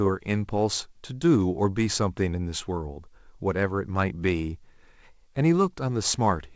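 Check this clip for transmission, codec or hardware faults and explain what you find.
Listening through the speech, nothing stood out as a problem, with the call path's G.722 coding leaving nothing audible above 8 kHz.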